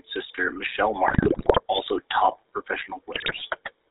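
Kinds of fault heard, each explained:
GSM full-rate codec: The whole clip carries the plainly audible buzzy, gravelly roughness of the first GSM speech coder, which fits its 13 kbps full-rate mode. The coder rebuilds speech from a vocal-tract filter driven by a sparse, regularly spaced pulse train, and nothing above 4 kHz survives. A simple 4 kHz low-pass would only sound muffled but smooth. The grainy buzz riding on every voiced sound is what marks this as the codec itself.
GSM bit errors: From 1.08 to 1.62 s and again from 3.14 to 3.43 s, the speech breaks into squawks, pops and gargling. This points to corrupted bits reaching the decoder over a weak link, hitting a couple of dozen frames in the first burst and about a dozen in the second. Damaged filter, pitch or gain values warp the spectrum or spike the level frame by frame. Packet loss would instead leave gaps or smoothed-over repeats, not these harsh, wrong-sounding outbursts.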